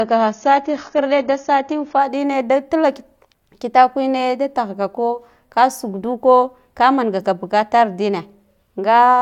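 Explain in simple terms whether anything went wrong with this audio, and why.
For the first 2.0 seconds the speech sounds dull and smeared, with nothing above about 7 kHz, then suddenly turns clear. This is an adaptive stream starting at a low bitrate, which then switches up. Unlike a dropout, there's no gap at the switch.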